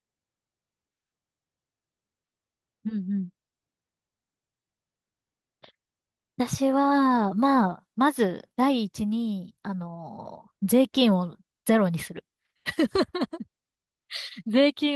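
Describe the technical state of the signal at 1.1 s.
At 1.1 s the speech is intact, with no fault present, carrying only the ordinary coding character of the WebRTC call path it passed through.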